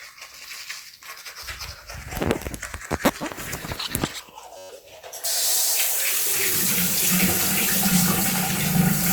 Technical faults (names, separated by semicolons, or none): system hang loop